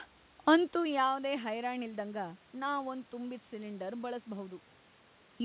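No technical faults can be heard in this speech recording. It went through a call path whose bandwidth ends at 4 kHz, which gives it the narrowband character of a G.711 telephone codec.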